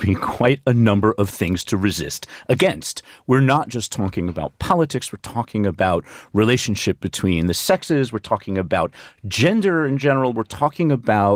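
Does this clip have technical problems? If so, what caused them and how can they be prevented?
No, the speech carries only light coding traces from Opus voice compression, with the full audio band kept, which fits hybrid coding at around 24 kbps, and nothing in the signal calls for correction or prevention.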